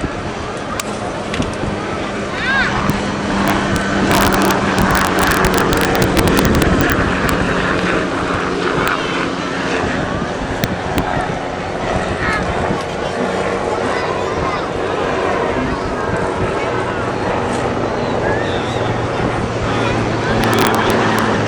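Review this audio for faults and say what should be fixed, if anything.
Integer overflow: loud peaks exceeded the integer ceiling and wrapped to the opposite sign instead of clamping, producing harsh cracks at 0.80, 2.90, 7.29 and 8.88 s, and over 3.48–3.76, 4.12–6.92, 10.64–10.98 and 20.44–21.19 s. Use saturating arithmetic or headroom before the gain stage.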